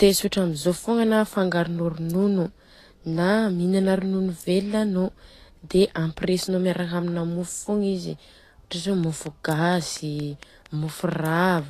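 Throughout the speech, the file is low-bitrate audio saved at a high bitrate: the MP3 was most likely made from an earlier low-rate encoding, which fits something like 35 kbit/s Vorbis, and re-encoding at 320 kbit/s restored nothing. The sound stops dead above 14.2 kHz and keeps that first codec's artefacts.

From 9.04 s to 11.6 s, a repeating pulse, likely interference or a faulty connection, lands on the signal as a train of clicks: about ten evenly spaced ticks at 4.31 per second, similar in shape, peaking a few decibels above the speech.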